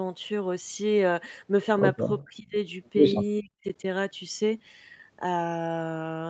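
An echo canceller that likely could not tell the local talker from loudspeaker echo while both sides spoke at once turned the whole signal down. The result is speech suppressed in double talk, from 2.24 to 2.57 s and again from 3.4 to 3.83 s. The speech sinks by roughly 25 dB in the first stretch and by as much as about 40 dB in the second, for a few hundred milliseconds each time.

Inside that second dip, from 3.66 to 3.72 s, one side's loudspeaker path let some of its microphone pickup back through, which is likely an echo leak. A brief, faint scrap of the voice returns about 417 ms after the original, roughly 30 dB below the speech, riding on audio already cut to an 8 kHz bandwidth by the call path.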